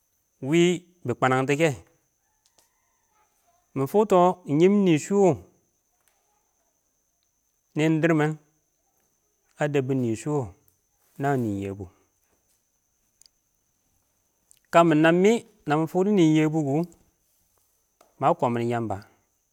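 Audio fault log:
No faults were found in this speech recording.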